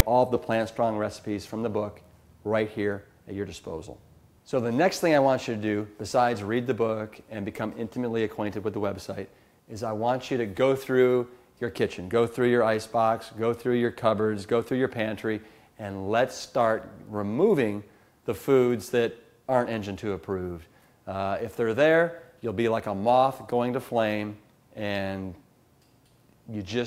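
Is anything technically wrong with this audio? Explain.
Yes. At 0.00 s the file opens with file tags played as audio: a block of text tags at the head of the file is decoded as if it were sample data. For about 4 ms this gives a hard-edged burst of loud rasp, offset to one side, before the real audio begins.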